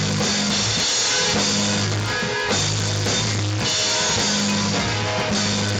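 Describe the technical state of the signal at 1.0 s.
At 1.0 s the sound is affected by a resampler restarted on every block, a fault that runs through the whole clip. The rate converter, in what sounds like a 16 kHz to 48 kHz conversion, processes each 100 ms chunk in isolation and never sees the real neighbouring samples at the chunk edges. Each boundary therefore carries a small discontinuity. Since 1.0 s falls on one of these edges, a tick lands there, part of a steady 10 Hz click pattern audible whenever signal is present.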